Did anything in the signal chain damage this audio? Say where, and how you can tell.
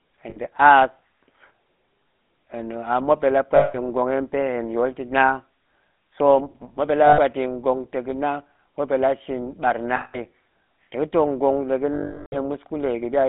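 Yes. The codec stage damaged it throughout. This speech has the gravelly, buzzy roughness of the GSM full-rate codec, which fits 13 kbps coding. The codec models the vocal tract and excites it with a regular pulse train built from only one in three excitation samples. That coarse excitation produces the buzz. The band is also confined to roughly 200 Hz to 3.5 kHz, so the sound is thin and dull at the top.

Lost GSM frames in the network or transport stage cause short dropouts at 0.30 to 0.38 s, at 3.56 to 3.77 s just after "a muop nɗe la", at 7.06 to 7.19 s just after "so muop ɗe la", at 9.96 to 10.18 s, and at 11.94 to 12.38 s. In each gap the sound freezes into a rough, metallic ring. The decoder is repeating the last good frame's parameters. The 60 to 380 ms durations fit 20 ms frames. The longest gap runs past a third of a second and is cut to silence.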